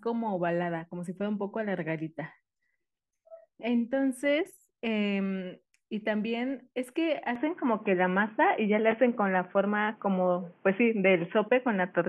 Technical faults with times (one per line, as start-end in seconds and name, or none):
7.35-12.08 input switched to a poorer device